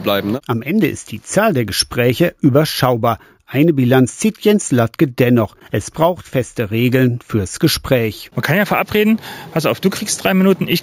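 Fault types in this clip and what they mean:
Imaging from sample-and-hold upsampling: each sample was simply repeated without a smoothing filter, which fits a rise from 16 kHz to 48 kHz. A mirrored spectrum fills 8 kHz to 16 kHz at about 19 dB below the signal, heard throughout as metallic fizz tracking the sound's level.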